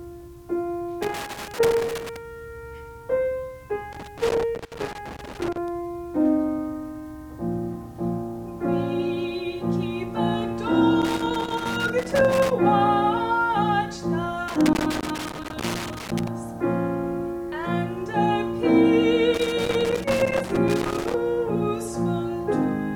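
Loose connector crackle at 1.03–2.16, 3.93–5.68, 11.02–12.51, 14.48–16.28 and 19.34–21.14 s: an intermittent contact chops the signal, giving irregular scratchy crackle.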